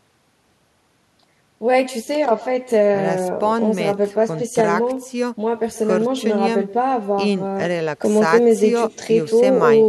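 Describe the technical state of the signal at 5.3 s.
At 5.3 s you're hearing echo with no canceller, and it isn't local to that moment; it runs through the whole clip. The far end is playing the call over a loudspeaker and its mic is feeding that straight back, so the speech returns after the network round trip, roughly 150 ms later and about 20 dB down. Each phrase gets a faint, thin shadow trailing just behind it.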